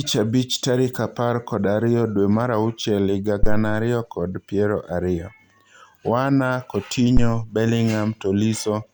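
At 3.43 to 3.80 s, just before "kod piero", and again at 7.17 to 7.40 s, a phantom power thump appears: a supply switched on or off on the live input sends a DC step through the coupling capacitors, giving a deep thud decaying over about 82 ms and 51 ms. Unlike a plosive pop, it is unrelated to the speech.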